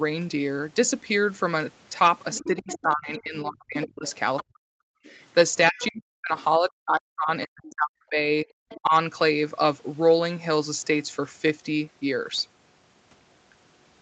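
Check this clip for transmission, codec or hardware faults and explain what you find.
Two echo-related faults appear in the first nine seconds of this speech clip, both consistent with a speakerphone-style call.

Other side's voice leaking through: A second voice is audible from 2.32 to 3.2 s, 3.82 to 4.44 s, 5.06 to 5.15 s, 5.76 to 5.9 s, 7.7 to 7.75 s and 8.69 to 8.8 s. It sits roughly 10 to 30 dB below the main talker and is loudest in the 3.82 s stretch. The likely cause is far-end audio from the device's loudspeaker reaching the microphone, with the echo canceller leaving residue behind. The short bursts come through as brief fragments rather than continuous speech.

Speech suppressed in double talk: From 2.39 to 4.82 s and again from 5.71 to 8.93 s, the main talker's level repeatedly collapses, at its deepest by around 40 dB. The gaps add up to about one and a half seconds in the first span and about two seconds in the second. 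These spans overlap the leaked voice above. That pattern likely means the echo canceller could not separate near-end speech from loudspeaker echo while both sides talked, so it attenuated everything. The microphone path's normal band limit, with nothing above 8 kHz, is separate from these dips.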